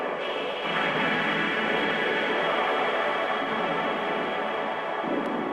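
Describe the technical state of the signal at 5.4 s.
At 5.4 s the signal is intact, with no fault present at that moment.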